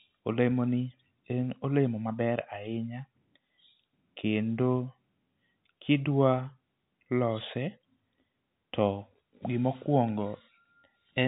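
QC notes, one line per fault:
Nothing to flag here: the speech has the familiar sound of G.711 telephone coding, with its usual ceiling at about 3.8 kHz.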